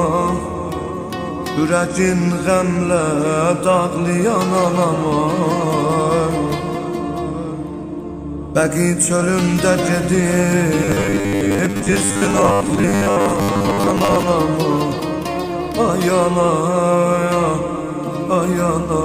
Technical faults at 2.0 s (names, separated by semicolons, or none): none